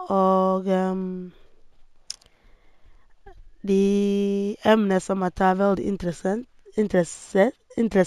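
Throughout the speech, imaging from linear upsampling is present: the rate was raised by straight-line interpolation, consistent with a 16 kHz source brought up to 44.1 kHz. The top end sounds dulled, and a faint mirrored image, roughly 35 dB down, sits between 8 kHz and 16 kHz, adding a light metallic shimmer to sibilants.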